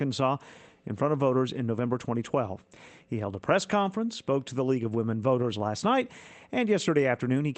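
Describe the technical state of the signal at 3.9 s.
At 3.9 s the signal is intact, with no dropout, glitch or other fault, and the sound carries the ordinary coding character of an Opus call path that passes content up to about 8 kHz.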